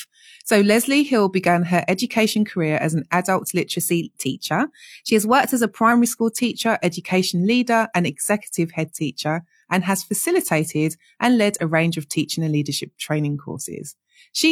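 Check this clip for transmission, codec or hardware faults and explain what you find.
There's one fault in this speech clip, a drift correction step. From 3.77 s to 5.92 s the playback suddenly runs about 5.4% fast, lifting the pitch by roughly 91 cents, just shy of a semitone, and then it snaps back to normal. The likely cause is clock-matching software nudging the playback rate in one jump to rebalance its buffer. It's heard as a brief, slightly chipmunky detune with a hurried pace.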